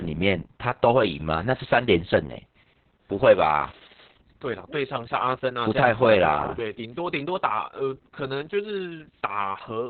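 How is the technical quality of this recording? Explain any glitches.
Technical quality is poor throughout. Heavy Opus voice compression runs the whole clip. Nothing reaches above 4.3 kHz, so the speech sounds muffled, hoarse and faintly robotic. This fits the SILK coder at a very low bitrate, near 6 kbps.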